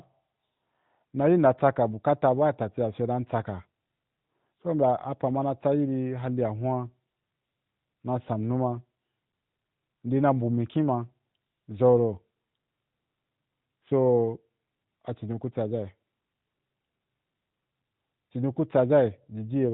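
No technical faults can be heard in the speech.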